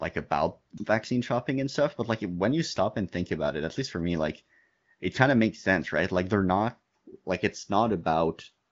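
No technical faults can be heard anywhere in this speech clip, which carries the bandwidth limit typical of AMR wideband coding.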